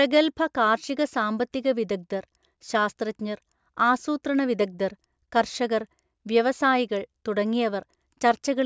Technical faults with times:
none

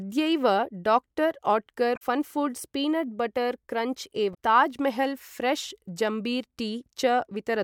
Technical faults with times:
1.93-2.02 damaged data in a compressed stream
4.31-4.35 damaged data in a compressed stream

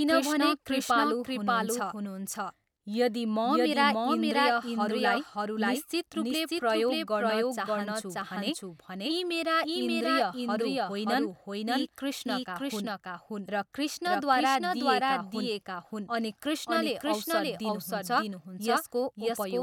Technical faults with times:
0.00-19.62 doubled audio track

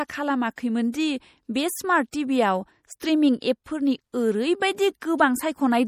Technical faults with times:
0.00-5.88 MP3 compression
3.00 pre-echo

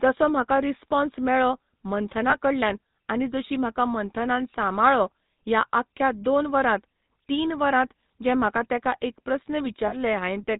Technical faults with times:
0.00-10.60 GSM full-rate codec
2.30-2.38 lost GSM frames
9.88-9.94 lost GSM frames

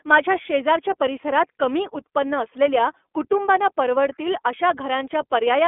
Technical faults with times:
0.00-5.67 iLBC codec

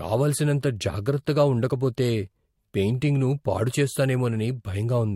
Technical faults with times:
none

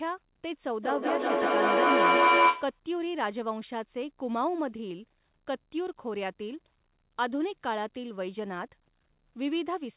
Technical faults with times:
0.83-2.81 feedback howl

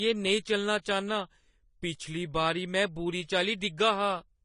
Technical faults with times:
0.00-4.45 transcoding between lossy codecs

